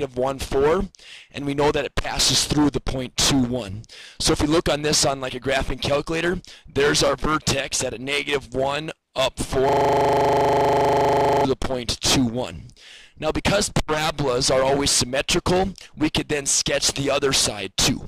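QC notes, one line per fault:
9.69–11.45 s system hang loop: the system froze while the hardware kept replaying one 40 ms buffer, turning the sound into a rigid 25 Hz buzz.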